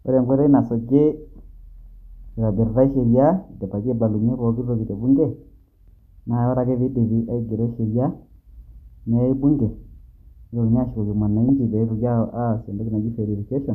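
Speech, with a brief burst of DAB burbling at about 11.49 s: a few short blips of noise. Weak reception let bit errors slip past the error correction into the MP2 data, so corrupted samples put noise blips in single sub-bands. The sound points to a handful of damaged frames at a bit error rate of roughly 0.05%. A spectrogram would show isolated bright rectangular blocks confined to narrow frequency bands.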